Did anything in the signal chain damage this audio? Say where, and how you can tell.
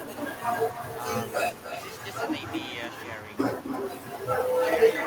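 Yes. The damage is in call processing: echo with no canceller, present throughout the speech. Each phrase returns roughly 300 ms later, about 12 dB quieter and thinner. The far end's loudspeaker feeds its microphone, and nothing removes that copy before it travels back.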